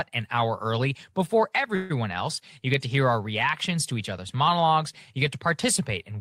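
At 1.75–1.92 s, after "an hour early before", a call audio freeze stretches the last sound into a fading buzz, likely from a drained jitter buffer. Speech resumes unbroken, 144 ms later, shown as smeared horizontal bands on a spectrogram.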